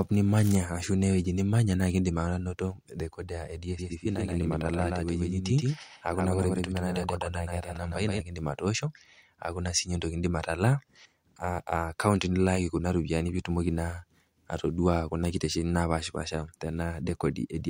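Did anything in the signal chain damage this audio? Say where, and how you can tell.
Yes, there's a doubled audio track from 3.79 to 8.21 s: a clean second copy of the speech trails around 150 ms behind, roughly 5 dB down, with no reverb tail, and it cuts in and out abruptly. Likely a second, slower capture path in the driver or buffer stage mixing in.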